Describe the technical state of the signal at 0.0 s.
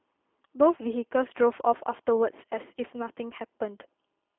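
At 0.0 s, as throughout the clip, the speech has passed through a G.729 codec. The low-rate coder rebuilds each 10 ms frame from a vocal tract filter, a pitch predictor and a handful of pulses, which fits an 8 kbit/s link. The sound is telephone-narrow, roughly 250 Hz to 3.4 kHz with nothing above 3.5 kHz, and has a plainly audible rough, synthetic coarseness.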